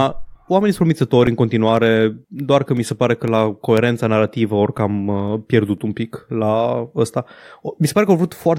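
From 0.27 to 5.78 s, periodic USB or driver dropouts blank a couple of milliseconds of speech every 0.5 s, producing about ten regular ticks.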